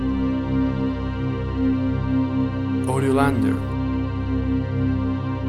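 Nothing in the recording stood out as a technical problem on listening.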